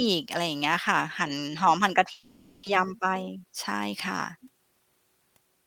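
At 2.11 s the stream was likely hit by a long network dropout. The receiver filled the gap with concealment until 2.67 s, stretching the last speech sound into a fading buzz for about half a second. Roughly 400 ms of speech never returned, and nothing falls fully silent.

From 2.77 to 3.88 s, a jitter buffer speed-up trims the extra delay, about a tenth of a second, that built up during the gap. Short pitch-period pieces are cut repeatedly, so speech runs at 109% speed with unchanged pitch and sounds hurried.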